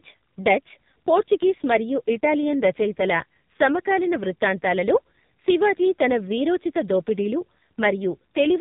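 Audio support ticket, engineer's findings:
Speech squeezed through AMR narrowband mobile codec across the whole clip: nothing above 4 kHz, buzzy synthetic voicing, heavy damage consistent with a low mode around 5.9 kbps.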